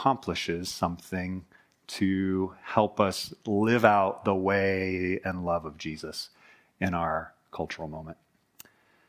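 Nothing goes wrong anywhere in this bit of speech, so there's no technical fault to point to at any moment.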